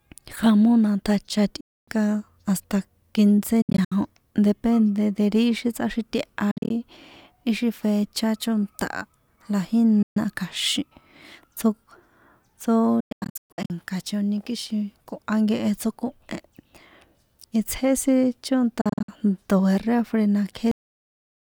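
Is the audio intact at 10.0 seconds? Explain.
No, there's a gap from 10.02 to 10.17 s: the speech cuts to silence for about 133 ms, then resumes further along, likely a Bluetooth dropout where late packets were discarded.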